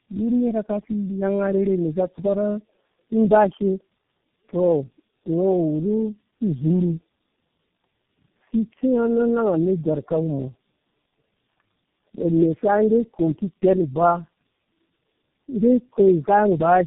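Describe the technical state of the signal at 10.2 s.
At 10.2 s the speech carries tandem speech coding, present throughout the clip. The sound suggests three low-rate speech codecs in a row, likely AMR-NB, G.729A and G.723.1, each re-encoding the previous one's already degraded output. It sounds rough, muffled and warbly. A spectrogram shows nothing above 3.8 kHz and smeared, unsteady harmonics.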